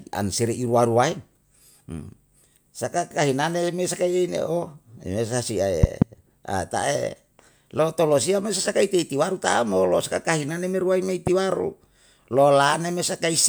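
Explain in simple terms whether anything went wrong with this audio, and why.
A sudden electrical jolt, likely from a plug, a switch or a static discharge, got into the signal path twice in this speech recording. Each one is a loud pop, a sharp thump much louder than the talking, while the speech carries on underneath. The first, just after "remesa si", is a quick double pop from 5.84 to 6.04 s. The second is a single, slightly quieter pop from 11.27 to 11.29 s.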